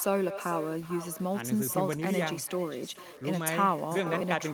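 From the first moment to the end of the speech, a grainy, rasping distortion rides on the signal, and it is most likely low bit depth without dither: the audio appears to have been rounded to about 7 bits, leaving an error only about 25 dB below the speech. Unlike the steady hiss that dither would leave, this grit follows the speech itself, roughening quiet syllables and vanishing or sputtering as levels fall toward silence.

Running alongside it for the whole clip is echo with no canceller. Each phrase returns roughly 0.4 s later as a quieter copy, about 14 dB down, thinner than the original, because the far end's microphone picks up its loudspeaker and nothing removes it before it comes back over the line. What separates this from room reverberation is that the repeat is a distinct, delayed replay of the speech rather than a smooth tail blending into it.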